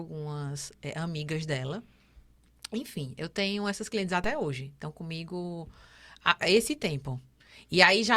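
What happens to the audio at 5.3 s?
At 5.3 s the audio sits on a shifted zero line from a DC step that begins at 4.24 s, right after "eu tenho essas clientes", and holds to the end. The waveform's baseline jumps by about -25 dBFS, heard as a low thump or click at onset while the speech carries on unchanged.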